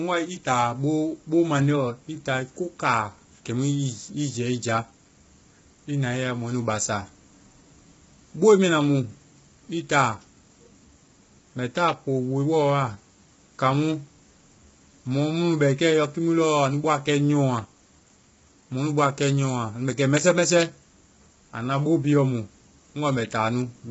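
Throughout the speech, the sound is rough and grainy, with noise filling the gaps between pitch harmonics and nothing above 7.7 kHz. This is likely low-delay AAC compression: its short frames resolve harmonics poorly, and the heavy damage fits a bitrate near 16 kbps.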